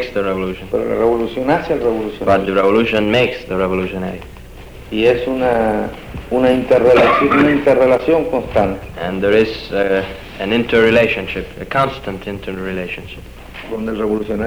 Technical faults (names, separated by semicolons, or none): low bit depth without dither